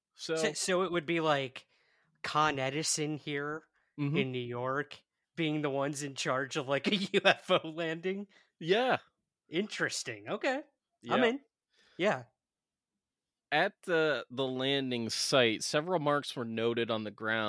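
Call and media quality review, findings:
No call or media quality faults found in this speech recording.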